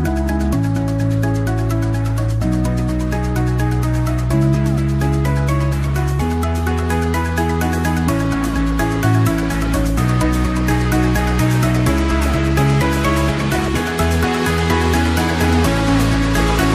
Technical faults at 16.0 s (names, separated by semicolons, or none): none